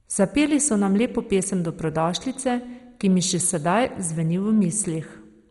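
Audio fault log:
Throughout, MP2 compression: the speech sounds dull and muffled, with a gurgling, granular roughness and nothing above about 11.2 kHz. Upper sub-bands seem starved of bits and drop in and out. The surviving bands are coarsely quantised. This likely points to heavy MPEG Layer II coding near 56 kbps.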